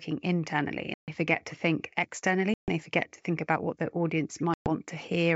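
Packet loss on an ADPCM call leaves hard-edged silent holes at 0.94–1.10 s, 2.54–2.71 s and 4.54–4.71 s, losing 140, 140 and 120 ms. The decoder's predictor and step size then lose sync, so speech resumes slightly distorted, at times clicky or mis-levelled.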